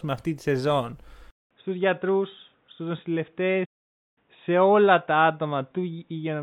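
At 1.31 s, just after "αυτή τη σεζόν", the recording most likely switched its input to a poorer device, such as another microphone or a headset's call profile. After a gap of about 200 ms, the speech comes back narrower and duller. The top of the band is lost, so consonants lose their crispness. The level drops by a few decibels, and a faint new noise floor, roughly 50 dB under the speech, sits beneath it until the end.

From 3.65 s to 4.18 s there is a playback stall. The player likely ran short of data or had its thread held up, so the output simply stopped for about 0.51 s. The speech breaks off in mid-flow with a dead silence, then resumes, still carrying the dull, band-limited tone of the switched input.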